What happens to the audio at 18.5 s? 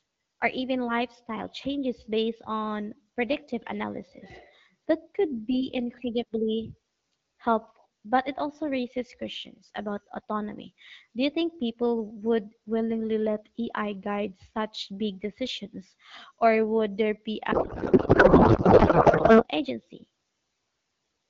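A codec payload misread runs from 17.51 to 19.44 s, just after "or would there be". The decoder likely takes octet-aligned AMR-WB frames as bandwidth-efficient, so the speech becomes garbled noise and warble. Unlike packet loss, there are no gaps, only wrong sound.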